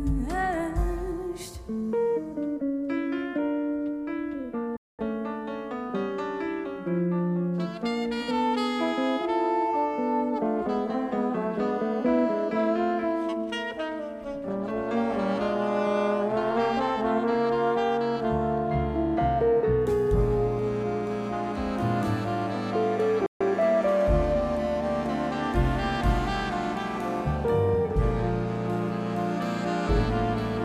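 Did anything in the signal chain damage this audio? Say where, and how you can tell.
Yes, at playback. The sound halts in mid-flow at 4.77–4.99 s (220 ms) and 23.26–23.41 s (141 ms). These are playback stalls, likely a starved or blocked player.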